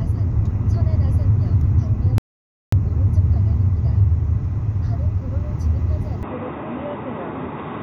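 A recording of sounds with two faults. The player likely ran dry of data or had its thread blocked, causing a playback stall: from 2.18 to 2.72 s the output falls completely silent for about 0.54 s, cutting the sound off mid-flow before it resumes. At 6.23 s the recording likely switched its input to a poorer device, so from there to the end the band narrows and the sound turns dull and boxy, dropping by roughly 10 dB with a faint new background noise. There is no gap at the switch; the change in tone is abrupt.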